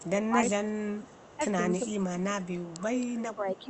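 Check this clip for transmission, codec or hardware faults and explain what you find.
Two faults run through the clip, both pointing to echo cancellation trouble during simultaneous talk, carried over a call link whose 8 kHz audio bandwidth fits Opus at around 32 kbps.

Speech suppressed in double talk, from 0 to 1.41 s and from 1.79 s to the end: the voice dips by as much as about 20 dB, for roughly a second in the first stretch. The likely cause is an echo canceller that could not tell local speech from loudspeaker echo and attenuated both.

Echo leak at 0.23 to 0.28 s (about 35 dB below the speech), 0.74 to 1.38 s, 1.88 to 2.6 s and 2.95 to 3.59 s (each about 25 dB down): a faint copy of the voice trails it by 360 ms. It is likely residual loudspeaker pickup that the far end's canceller failed to remove.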